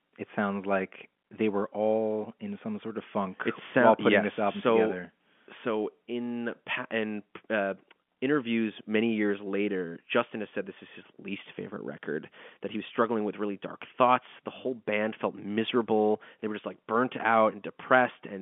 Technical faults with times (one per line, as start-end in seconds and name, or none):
none